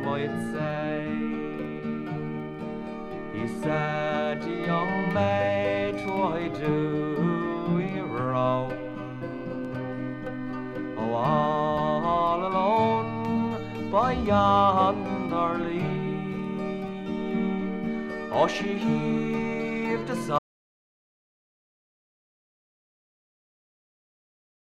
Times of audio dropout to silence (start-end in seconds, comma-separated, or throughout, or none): 20.39-24.61